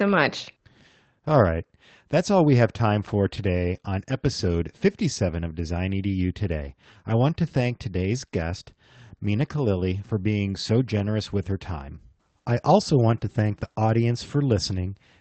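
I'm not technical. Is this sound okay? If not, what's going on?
No. There's one brief rough spot, from about 3.37 to 3.47 seconds, right after "we have time for" and just before "on episode". For roughly 60 milliseconds the speech turns grainy and noisy, though it never drops out. This is a lost packet rebuilt from error correction. A few chunks of the call audio, likely three separate ones, went missing. The chunks after them carried rough backup copies, which the call software played to fill the hole.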